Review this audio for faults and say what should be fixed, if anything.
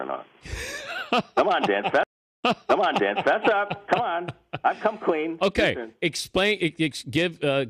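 At 2.03 s the audio drops out for about 0.4 s, then comes back about 0.9 s earlier than where it stopped, so the listener hears that stretch a second time, through to about 3.36 s. This is a stream reconnect. The connection broke, the player went quiet while it re-established the link, and a fresh decoder started on a burst the server resent from an earlier point. To prevent it, use a larger client buffer with automatic retry and resume by byte or timestamp offset.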